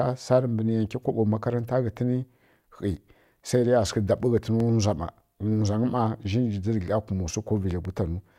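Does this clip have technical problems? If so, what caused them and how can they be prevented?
Yes. A loud pop cuts sharply through the speech at 4.60 to 4.63 s, and a double pop follows at 7.71 to 7.88 s, each peaking roughly 5 dB above the voice. The likely cause is a voltage spike from a plug, switch, static or driver glitch. To prevent it, secure connections and avoid touching switches or cables while recording.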